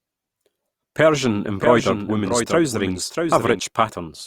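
From about 1.60 s to 3.60 s the speech carries a doubled audio track: a second full-band copy trails the original by roughly 0.7 s, a few decibels quieter, with no decay or room colour, likely from a slower capture path or misaligned edit. It cuts in and out abruptly at those points. On a spectrogram, each harmonic stack reappears shifted right by that fixed gap, slightly fainter; the waveform shows overlapping envelopes with hard edges.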